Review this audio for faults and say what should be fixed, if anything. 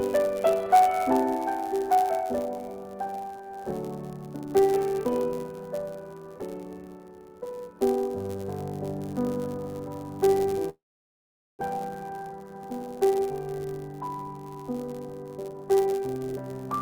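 A block size mismatch with zero padding runs through the whole clip. A buzz sits at about 99.6 Hz, the block rate, and the audio runs 0.4% slow (0.996×) at normal pitch. This steady buzz with unchanged pitch distinguishes it from a clock-rate mismatch, which would shift pitch. Make the writing and reading stages agree on block length.

From 10.69 to 11.63 s there is a long network dropout. The last sound is stretched into a fading tail and then falls to near silence for about 0.81 s, and some 600 ms of audio never returns. This is unlike a short packet loss, which concealment would bridge smoothly. The likely cause is a delay jump of roughly 0.3 s on the link. Stabilise or add redundancy to the network path.

From 11.78 to 13.27 s a jitter buffer speed-up plays the audio at about 120% speed at unchanged pitch. Around 0.3 s of accumulated delay is removed in short pitch-period cuts, so the audio sounds hurried. 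Because the pitch stays the same, this is not a resampling error. Tune the jitter buffer to absorb backlog more gradually.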